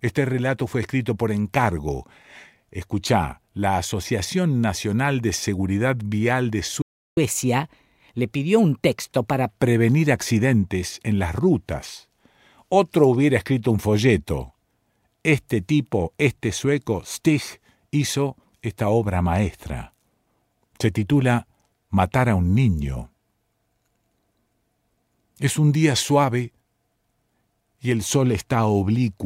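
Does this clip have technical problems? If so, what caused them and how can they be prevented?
Yes. A playback stall silences the sound from 6.82 to 7.17 s, about 0.35 s. The player likely starved of data or was blocked. A larger playback buffer would prevent it.

Catch-up at higher speed follows, from 7.17 to 9.52 s. The backlog plays 1.15 times faster, raising pitch about two semitones. Dropping late audio instead of resampling avoids this.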